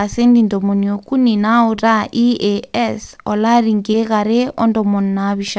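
At 1.76 to 1.79 s and again at 3.91 to 3.95 s, short concealed packet loss: roughly 20 ms of the speech arrived too late, and the receiver extended the preceding sound to bridge it, leaving a brief smeared, wobbling patch before the real audio resumes.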